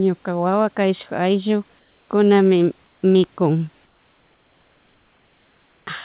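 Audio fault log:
1.79–2.09 s, 2.87–3.02 s and 3.86–5.87 s, comfort noise in place of the background: in each pause the room's textured hiss gives way to a smooth, unchanging noise about 2 to 3 dB quieter, which snaps back to the real background when speech resumes. Unlike a gate or dropout, the gap never goes silent. It is likely discontinuous transmission, with the receiver synthesising noise, band-limited like everything else here to below 4 kHz.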